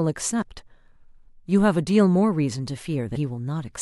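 A brief glitch breaks into the speech at 0.38 to 0.43 s, and another at 3.12 to 3.17 s. Both come from damaged data in a compressed stream: corrupted bytes make the decoder misread those frames and lose sync until it finds the next frame header.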